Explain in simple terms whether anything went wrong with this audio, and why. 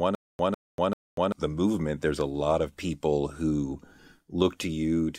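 The playback or stream most likely stalled right at the start, and each time it retried it replayed its last scrap of audio before running dry. That gives a stutter with silent gaps from the opening to about 1.32 s. It is already happening when the clip begins: a burst of speech roughly 150 ms long repeats three times, with about 240 ms of dead silence after each, so it returns every 390 ms. Whatever should have played there is missing.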